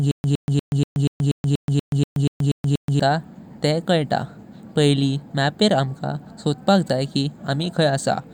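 From the very start of the speech until about 3.0 s, the audio is caught in a stutter with silent gaps. A burst of about 113 ms repeats twelve times, each followed by roughly 127 ms of digital silence, giving a steady cycle of about 240 ms. The likely cause is a stalled player or stream that replays its last buffered fragment on each retry and then runs dry. Whatever speech belonged in that stretch never plays.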